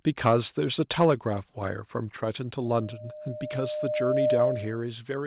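At 0.26 to 0.31 s and again at 1.0 to 1.06 s, microphone overload cuts off the tops of the loudest peaks, about 4 dB and then about 2 dB past the limit. The cause is likely an input gain set too high. Unlike steady coding noise, the harsh crackle appears only on those peaks.

At 1.68 s the microphone volume is stepped down: speech and background together drop about 3 dB at once, likely as the software reacts to the distortion. A fade would glide, but this is a single instant step.

From 2.61 s a loudspeaker feedback squeal begins. The microphone re-captures its own loudspeaker output until a tone at 608 Hz sustains itself, swelling over roughly one and a half seconds to about 10 dB above the speech and stopping at 4.83 s. It is a single pitch that swells, not a fixed hum.

Further steps of about 2 dB at 2.91 s and about 3 dB at 4.95 s lower the level again. Throughout, nothing is heard above 4 kHz, consistent with a G.711 call path.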